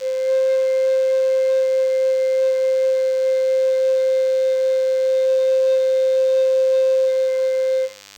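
DECT cordless phone buzz runs through the whole music clip. A nearby cordless handset or base station fires a radio burst every 10 ms, which the audio circuitry rectifies. The result is a thin 100 Hz buzz rich in harmonics, sitting roughly 25 dB beneath the music.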